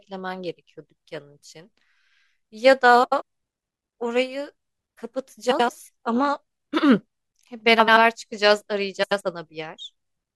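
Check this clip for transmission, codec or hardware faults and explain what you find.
The speech has one recurring transmission fault: frames out of order, at 3.03–3.22 s, 5.51–5.69 s, 7.79–7.97 s and 9.03–9.21 s. Each time, two adjacent runs of frames arrived swapped and the decoder played them as received. Each run lasts about 85 ms, which fits four frames apiece. The stretch plays with its halves exchanged, giving a brief garbled flutter. No time is lost, so the timing around each event stays intact.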